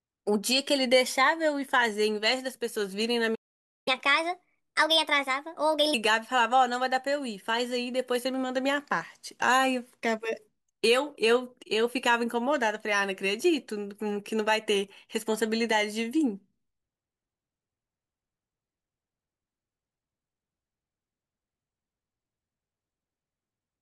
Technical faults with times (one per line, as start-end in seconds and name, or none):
3.35-3.88 playback stall
3.88-5.94 catch-up at higher speed